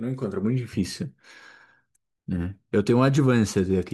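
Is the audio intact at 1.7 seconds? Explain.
Yes, at 1.7 seconds the speech runs cleanly, with no dropout, click, distortion or other fault audible there.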